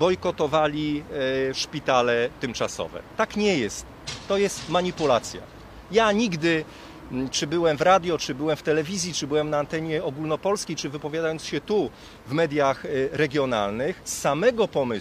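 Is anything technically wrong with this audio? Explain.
No, nothing technically wrong is audible anywhere in this clip.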